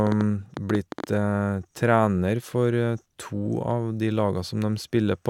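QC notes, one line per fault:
0.07–1.05 s, train of clicks: about ten matching pulses, unevenly spaced near 9.3 per second, about 10 dB above the speech; uniform shape rules out crackle; likely interference.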